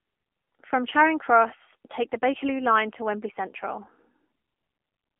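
From start to finish the speech has the AMR narrowband mobile codec on it, and the damage is plainly audible. The band is squeezed to roughly 250 Hz–3.4 kHz with nothing above 3.6 kHz, so it's that boxed-in phone sound. The codec rebuilds the voice from a vocal-tract model fed by a few pulses per frame, and at this level it comes out buzzy and synthetic, which fits the 7.4 kbps AMR-NB mode.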